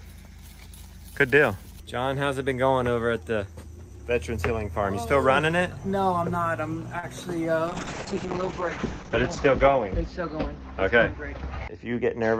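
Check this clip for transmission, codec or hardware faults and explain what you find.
Three transmission faults appear in the second half of the clip.

From 6.99 to 7.05 s, a sound hangs slightly too long with a faint buzz. This is a short stall from a late packet: the jitter buffer ran dry, so the receiver stretched the last audio by 34 ms until the packet arrived.

From 7.67 s to the end, the audio turns rough and muffled, with the top end dulled. This is a call bitrate drop from 48 to 8 kbps, which narrowed the coded bandwidth from 20 kHz to 8 kHz. It sits at its lowest for about 1.6 s.

Between 11.68 and 11.96 s, the sound briefly hurries along at about 110% speed while the pitch stays the same. This is a jitter buffer speed-up: the receiver trimmed a few tens of milliseconds of pitch-period pieces to reduce its backlog.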